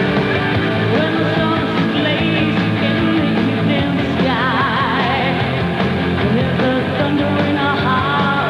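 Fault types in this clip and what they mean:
No technical faults can be heard in this audio; the signal stays steady throughout with no dropouts, distortion or glitches.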